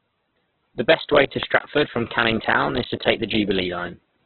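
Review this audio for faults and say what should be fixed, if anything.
Throughout the speech, the audio is band-limited, with nothing above 4.3 kHz, and the remaining content sounds rough, grainy and noisy, with heavy codec damage. The likely cause is Opus compression in its CELT music mode at a narrowband setting, consistent with a very low bitrate around 8 kbps. When bits run short, that encoder fills bands with folded or noise-like content, so tonal detail turns to grit. To prevent it, encode at a higher Opus bitrate that allows full bandwidth.

CD scratch ticks appear between 1.43 and 2.98 s, starting after "best way to" and ending before "take the." Eight short ticks, the longest about 5 ms, recur at a regular disc-rotation rate and vary in strength. A surface scratch corrupts more data per revolution than error correction can rebuild, so the player interpolates or mutes those samples and produces a click once per turn. 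To prevent it, rip from a clean, undamaged disc using secure, re-reading extraction.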